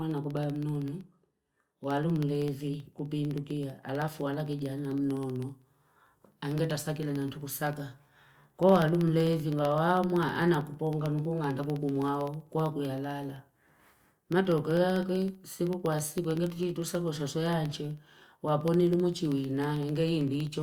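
Speech with periodic USB or driver dropouts from 0.11 to 20.53 s: every 64 ms, a sub-millisecond silent gap ticks through the voice, showing as evenly spaced thin vertical broadband lines on a spectrogram.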